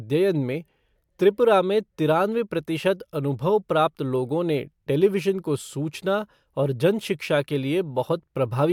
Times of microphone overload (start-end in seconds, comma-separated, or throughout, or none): none